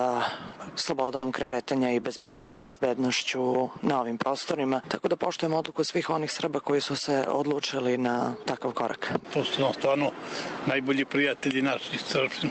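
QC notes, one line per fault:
1.03–1.09 s and 1.15–1.24 s, short stall from a late packet: the sound is held about 40 ms, then about 70 ms, with a slight buzz or dip as the receiver stretches the last sound while waiting. Nothing is lost, and these are brief holds rather than fading gaps.
1.42–1.54 s and 2.16–2.78 s, call audio freeze: a fill of about 100 ms, then a much longer one of about 600 ms, decays as a fading buzz or hiss without reaching silence. The sound then resumes where it stopped, so nothing is lost. The likely cause is packets held up until the jitter buffer ran empty. The longer span and the fading separate these from the short stalls.
8.52–12.51 s, jitter buffer speed-up: the audio runs at about 107% speed at unchanged pitch and sounds hurried. Repeated cuts of tiny pitch-period pieces remove roughly a third of a second in total, which steadily drains the delay built up by the earlier waits.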